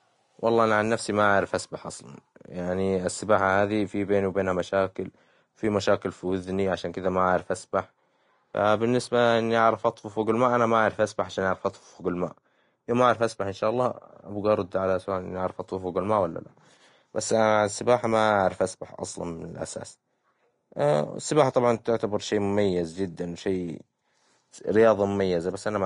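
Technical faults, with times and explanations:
Throughout: Vorbis compression; treble becomes grainy hiss rather than simply cut off, and consonant onsets blur, likely from a bitrate near 35 kbps.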